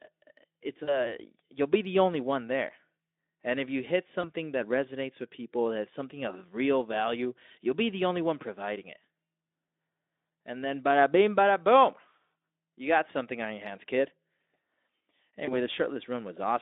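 VoIP packet loss concealed by the speech codec occurs at 0.83 to 1.15 s, 4.21 to 4.30 s and 15.45 to 15.61 s. The decoder extrapolates lost audio into a fading buzz, and recovery trails afterward. The first gap fits about 40 ms missing, and the others about 20 ms each, all over a Speex-coded narrowband line.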